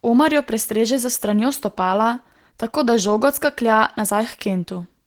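Opus voice compression runs throughout the speech, sounding hoarse and slightly robotic, consistent with hybrid coding near 16 kbps. A spectrogram shows content reaching about 20.2 kHz, but with patchy, coarse energy above 8 kHz, smeared harmonics below it, and blockiness fitting 20 ms frames.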